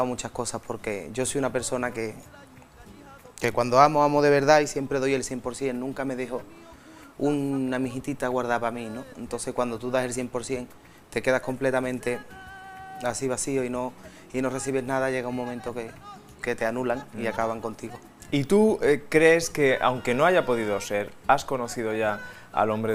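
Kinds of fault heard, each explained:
No faults are audible anywhere in the clip.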